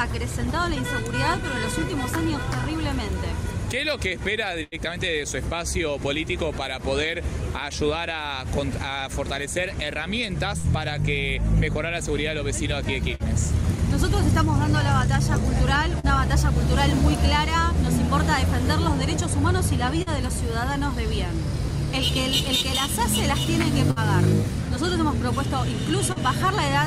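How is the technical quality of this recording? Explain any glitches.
Network packet loss interrupts the recording at five points, heard as held, fading sounds, short gaps and brief smears.

At 4.63 to 4.75 s and 23.91 to 23.99 s, a burst of packet loss sounds like the last sound held and fading before the audio jumps ahead. About 40 ms of real sound is missing each time. The receiver stretched the last sound over roughly 83 ms and then 53 ms. In the first burst, a 43 ms delay shift also moved the timing.

From 10.58 to 16.06 s, scattered short gaps cause about three isolated short gaps. Single packets went missing, 120 ms in all, and each hole was patched by continuing the preceding sound. The longest patch was around 70 ms, and 12 ms of audio was dropped.

At 20.02 to 20.09 s and 26.12 to 26.19 s, short concealed packet loss leaves a quick smear or wobble. About 40 ms never arrived in time, and the decoder filled roughly 42 ms and 36 ms by extending the last sound before blending back.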